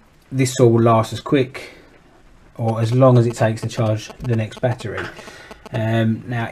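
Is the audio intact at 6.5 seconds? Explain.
Yes, the audio at 6.5 seconds is intact, with no dropout, click, distortion or other fault at that moment.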